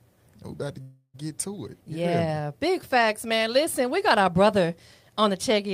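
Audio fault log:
0.81–1.23 s, call audio freeze: the sound stalls and its last fragment is carried on as a fading continuation for about 325 ms, followed by roughly 50 ms of silence. The audio then resumes exactly where it stopped, so nothing is missing; instead a gap is inserted and everything after it runs about 325 ms late. The likely cause is packets held up in transit, letting the jitter buffer run empty until they arrived.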